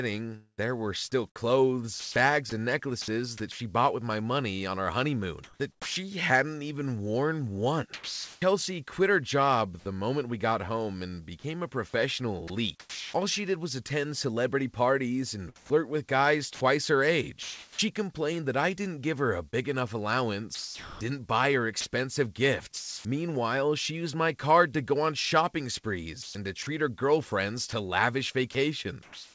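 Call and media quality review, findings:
Sound chopped by the voice detector: likely sender VAD toggling on and off, quiet stretches swapped for comfort noise. Choppy sound at 0.36–8.42 s (before "quit her job the"), 12.48–13.14 s, 15.56–23.05 s (after "attend celebrity parties and"), and 26.23–29.34 s (after "to go on shopping"). Call path G.722 at 64 kbps; nothing above 8 kHz.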